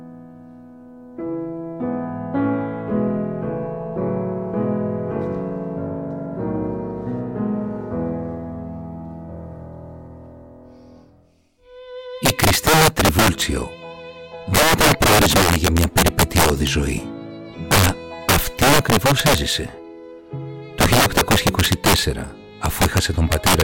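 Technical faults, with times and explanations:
12.25–13.42 s, 14.55–16.67 s, 17.72–17.89 s, 18.29–19.38 s, 20.81–21.99 s and 22.66–23.62 s: integer overflow. Loud peaks exceed the integer limit by about 7 to 11 dB. They are not held at the limit but wrap to the opposite sign. Each peak jumps across the full range. This causes violent cracks that are far harsher than clipping.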